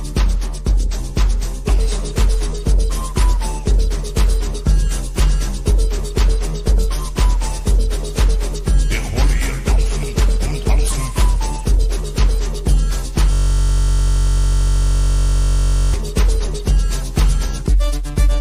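From 13.33 s to 15.94 s a system hang loop occurs: the host stalled while the audio hardware kept replaying its ring buffer. A 21.33 ms segment, which fits a 1024-sample buffer, repeats over a hundred times, producing a steady buzz at 46.9 Hz.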